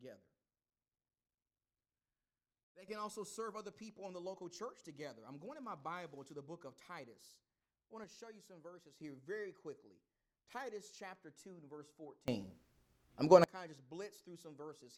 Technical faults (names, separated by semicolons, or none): sudden gain jump